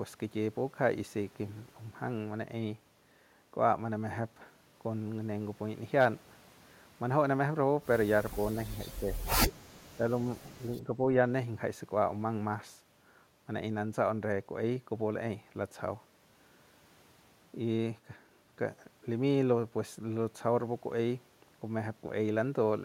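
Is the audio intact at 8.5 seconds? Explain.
No. Speech suppressed in double talk affects the audio from 8.35 to 8.58 s. The speech level dips by a modest amount, around 5 dB at its deepest, with about a tenth of a second of the span actually pulled down. The likely cause is an echo canceller meeting both sides talking at once: unable to separate the local talker from the loudspeaker's echo, it turned the level down, taking the wanted speech with it.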